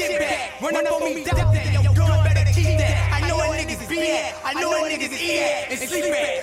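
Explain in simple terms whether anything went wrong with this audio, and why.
Everything has a slapped, stuttering edge from start to finish, as if each sound is instantly repeated at full strength. This is a doubled audio track: a second, identical copy runs about a tenth of a second behind the first and is just as loud. The copy is a clean repeat with no fading tail or room echo. The likely cause is the same sound being picked up twice, once through a slower route, or two copies left out of step during editing.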